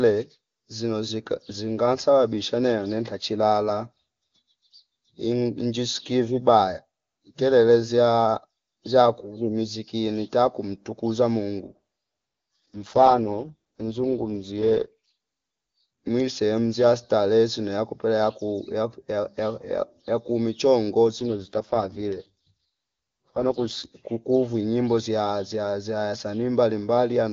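From 11.68 to 15.14 s and again from 21.19 to 23.86 s the speech turns rough and buzzy with no gap or change in bandwidth, consistent with an AMR rate drop on a weak link, the raspiness fitting a fall from the top wideband rate to around 6.6 kbit/s.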